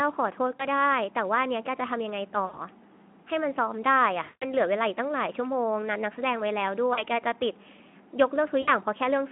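Speech over a Speex line shows VoIP packet loss concealed by the speech codec: the decoder extrapolated through missing packets at 0.55–0.66, 2.45–2.59, 4.23–4.54, 6.93–7.03 and 8.61–8.70 s, stretching sound into a fading buzzy tone or coloured noise, longest near 4.2 s, with weak recovery afterward.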